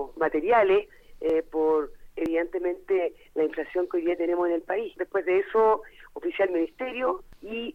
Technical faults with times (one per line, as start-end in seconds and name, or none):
1.29 dropped buffer (overrun)
2.26 dropped buffer (overrun)